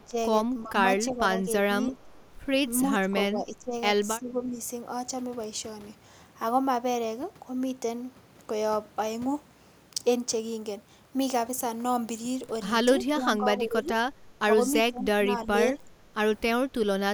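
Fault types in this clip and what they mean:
Echo leak: A very faint, delayed copy of the speech comes back, about a third of a second behind and about 35 dB below the main level. It shows very briefly at the start and again near 2 s. This is likely a loudspeaker echo the canceller missed.
Speech suppressed in double talk: The talker's level dips in short pieces while the other side seems to speak. Drops reach about 20 dB at their deepest, in the first 4.6 s and again between 13.2 and 17.0 s. This is likely an echo canceller turning down its own talker along with the loudspeaker echo.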